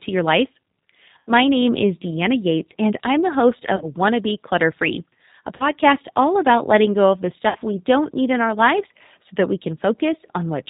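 Throughout, the speech sounds slightly rough and synthetic, with nothing above 4 kHz. That is the G.729 codec at 8 kbit/s, which rebuilds each 10 ms frame from a vocal tract filter, a pitch estimate and a few pulses, so the damage is plainly audible.

At 1.27–1.31 s, 3.76–3.87 s, 5.56–5.67 s and 7.49–7.57 s, the speech smears into a fading buzzy tone or coloured noise and stays weak briefly afterwards. This is VoIP packet loss concealed by the speech codec. About 80, 40, 40 and 60 ms of audio went missing, which fits four, two, two and three lost packets. The decoder extended its last pitch and filter while lowering the gain.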